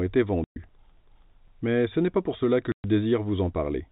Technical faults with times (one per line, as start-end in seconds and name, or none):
0.44-0.56 packet loss filled with silence
2.72-2.84 packet loss filled with silence